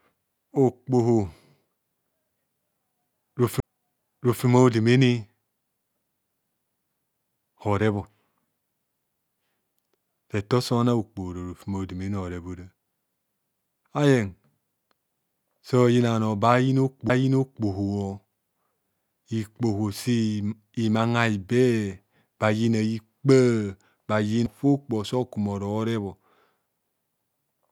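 The laser tracking fails three times, each a CD skip: the pickup jumps off its track onto a neighbouring turn of the spiral, the player briefly mutes, and playback resumes from a different point on the disc. The speech cuts out and restarts out of place with a tick at 3.60 to 3.63 s, where the gap is a few tens of milliseconds. Shorter, near-instant dropouts with the same displaced restart follow at 17.09 s and 24.46 s.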